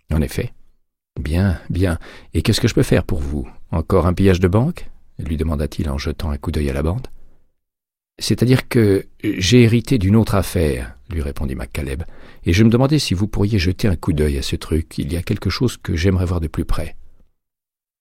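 No technical faults can be heard anywhere in the audio. Nothing in it needs a timestamp or an explanation.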